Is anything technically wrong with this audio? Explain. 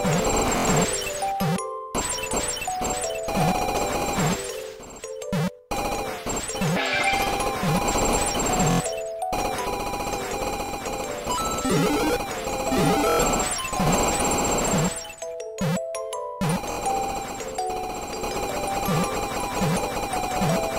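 Yes. A repeated buffer occurs at 0.58–0.65, 3.99–4.02, 8.71–8.80, 10.66–10.68, 13.10–13.19 and 16.72–16.77 s. When fresh audio arrived late, the output replayed its last 23 ms block, which fits a 1024-sample buffer. Each event is a rapid stutter of identical pieces with hard joins. A dropout would leave silence instead.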